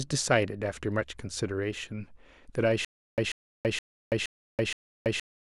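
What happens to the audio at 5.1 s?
At 5.1 s the clip is in a stutter with silent gaps, from 2.85 s to the end. A 139 ms burst of speech repeats every 470 ms, with 331 ms of silence between. A stalled stream likely replayed its last fragment. The intended audio is lost.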